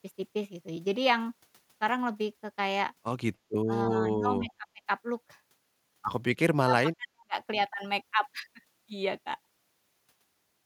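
Speech suppressed in double talk appears at 3.66 s, 3.88 to 4.89 s and 6.54 to 7.37 s. The speech dips by roughly 15 dB briefly, then by about 25 dB for most of a second, and finally by around 40 dB, nearly cutting out. The likely cause is an echo canceller that could not separate this side's talker from the far side's loudspeaker echo and attenuated everything while both sides spoke.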